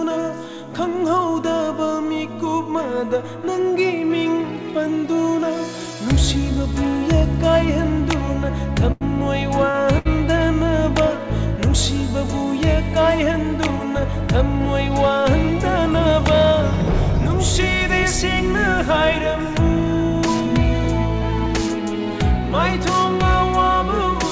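Three short stalls from late packets, at 8.92, 9.71 and 9.98 s. Each time the jitter buffer ran dry and the last sound got stretched for 89, 36 and 68 ms, with nothing lost. You hear brief held, slightly buzzy smears over the G.722 path's 8 kHz-limited sound.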